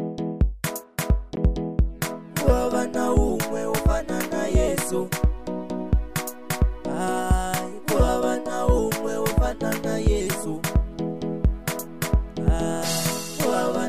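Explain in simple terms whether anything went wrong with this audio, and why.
A Bluetooth dropout at 1.36 s cuts the sound for about 15 milliseconds. That short silence, consistent with one lost packet, is likely from the wireless link failing to deliver audio to the headphones in time. Playback then resumes as if it had kept going.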